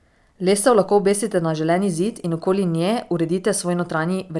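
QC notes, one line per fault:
Nothing stood out on listening to the speech.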